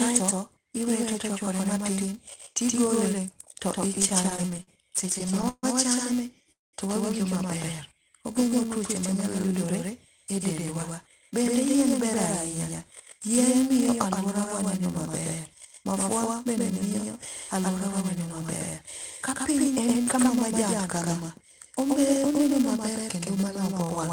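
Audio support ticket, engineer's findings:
Doubled audio track, throughout: a full-band second copy at a similar level trails by about 150 ms, dry with no room colour, giving a constant slapback. Likely cause is a second capture path or an edit holding two out-of-step copies.

Filter restarted on every block, throughout: steady buzz at 375 Hz that follows signal level, which fits a 128-sample block at 48 kHz. The filter loses its state at each block boundary and starts from silence, so every block opens with a small tick.

Repeated stalls (stutter), 3.95 to 6.50 s, starting after "ochwakore matin tigole to": 20 brief hold-ups, longest 141 ms, about 0.35 s of concealment in total. The jitter buffer kept running empty, so the last sound was extended each time. Audio drags, and nothing is lost.

Call audio freeze, 6.52 to 6.75 s, just before "to wawinjo": a 0.21 s hold, mostly silent, about 0.19 s. 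Likely packets were held in transit and the buffer ran dry. Playback resumes where it stopped, adding 212 ms of delay.

Jitter buffer slow-down, 7.94 to 9.20 s: playback runs at 91% speed with pitch unchanged, stretching the span by 119 ms. Repeated pitch periods and pause fragments rebuilt a low buffer, so sounds are drawn out.

Jitter buffer speed-up, 11.30 to 20.53 s, after "e dendwa": playback runs at 104% speed with pitch held, around 0.4 s removed. The buffer was over target and dropped short pitch-period pieces repeatedly to cut latency.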